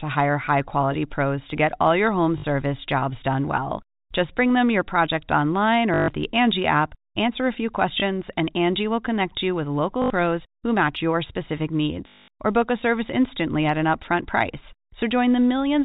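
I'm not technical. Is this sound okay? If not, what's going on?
No. This is packet loss with the last packet repeated: small chunks of the speech went missing in transit, and the receiver kept replaying the last chunk it had. You hear brief robotic stutters at 2.38–2.44, 5.94–6.08, 10.02–10.1 and 12.08–12.28 seconds, and a small blip at 8.0 seconds.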